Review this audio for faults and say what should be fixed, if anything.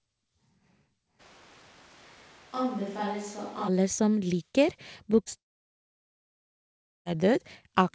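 From 1.21 to 3.67 s, the sound turns roomy and hollow. The low end thins out. The level falls by about 10 dB. Room noise rises to about 25 dB below the speech. Both changes are abrupt, in and out. This is likely a switch to a distant microphone. The close microphone's signal drops away, and a far-off pickup carries the room's reflections and noise instead. To prevent it, secure and monitor the close microphone's connection so the recorder never falls back to a distant source.

Two short concealed packet losses follow, at 5.24 to 5.28 s and 5.30 to 5.33 s. Each is heard as a brief smear or wobble. In each, about 20 ms of audio never arrived in time. The receiver filled the gap by extending the last sound, then blended back into the real signal. To prevent them, give the call more jitter-buffer headroom or a more stable network path.

From 5.37 to 7.07 s, the audio cuts out. A trailing buzz or hiss carries on from the last sound, fades, and leaves silence. 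About 1.7 s is missing, and the speech resumes further on without it. This is likely a long network dropout, a stretch where no audio reached the receiver and concealment ran out. The call audio elsewhere is limited to nothing above 8 kHz, consistent with G.722. To prevent the dropout, fix the connection's reliability, for example with a wired link or redundant transmission.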